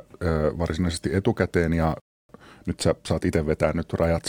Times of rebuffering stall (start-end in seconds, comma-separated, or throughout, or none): 2.00-2.29